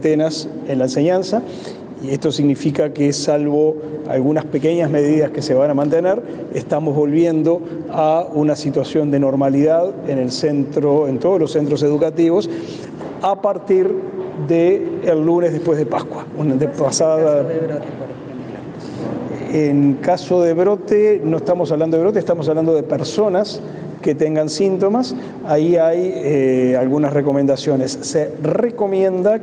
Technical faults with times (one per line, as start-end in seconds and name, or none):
0.00-29.43 gain pumping